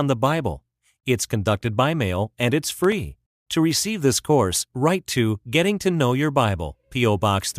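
From 2.69 to 2.92 s, processor overload crackle tears through the speech. Several buffers of about 3 ms miss their deadlines and drop to silence, leaving hard-edged gaps.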